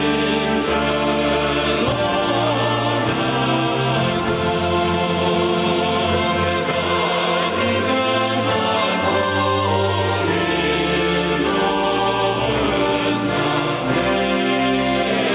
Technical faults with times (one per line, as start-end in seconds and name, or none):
none